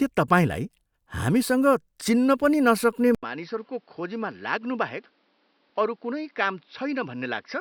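At 3.15 s the input likely switched to a poorer device: the speech cuts out for 80 ms, then returns roughly 10 dB quieter and duller, with nothing above 5.8 kHz and a new background noise floor about 35 dB down, lasting to the end.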